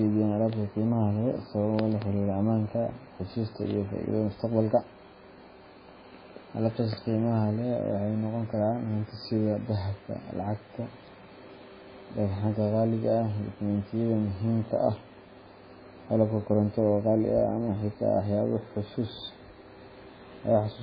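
MP3 compression is heard throughout the clip. Nothing reaches above 5 kHz, so the speech sounds dull, and weak frequency lines flicker between frames, leaving a watery swirl on s sounds. This heavy damage likely comes from a starved bitrate near 15 kbps.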